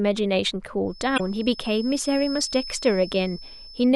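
From 0.83 s to the end, a thin steady whistle at 5.2 kHz sits roughly 15 dB under the speech, swelling and fading slowly in level. It is likely a feedback whistle, with the loudspeaker-to-microphone loop held just short of runaway. A spectrogram shows it as an unbroken horizontal line.

Between 1.14 and 1.20 s, damaged data in the compressed stream makes a short glitch, as the decoder misreads corrupt frames and hunts for the next valid header. It appears as a discontinuity in the waveform.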